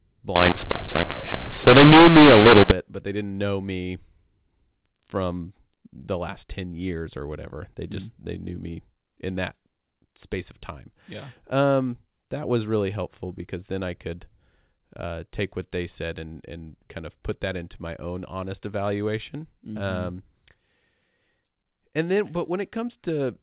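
From 0.36 to 2.71 s the speech turns harsh and gritty, with noise creeping into the gaps. That's mu-law and A-law mixed up: mu-law telephone audio decoded as A-law, so levels get scrambled and the quietest samples jump well above silence.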